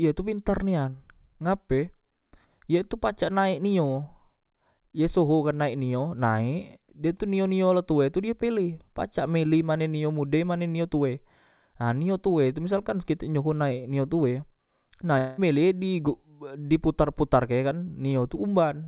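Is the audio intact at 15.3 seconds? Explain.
No. From 15.18 to 15.40 s the speech gives way to a fading, buzzy continuation of the preceding sound, lasting about 0.2 s with no true silence before speech resumes. This is likely a long network dropout whose gap was concealed, not a brief single-packet glitch.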